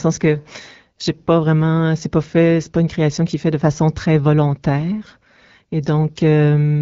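No technical faults are audible.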